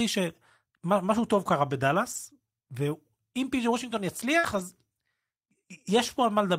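At 2.11 to 2.17 s there is a lost packet rebuilt from error correction. The stretch sounds like about two packets went missing. The packets that followed carried low-bitrate copies, and the decoder played those instead. About 40 ms of speech comes back rougher and noisier. Nothing drops out, but the texture briefly coarsens.

At 4.39 to 4.45 s comes a short concealed packet loss. About 40 ms never arrived in time. The receiver extended the preceding sound to fill the hole, then blended back. It is heard as a quick smear or wobble.

Right after, from 4.43 to 4.61 s, another lost packet rebuilt from error correction follows. This run points to about five lost packets. Roughly 100 ms is rebuilt from the low-bitrate copies, so the speech turns grainy and noisy for a noticeably longer stretch.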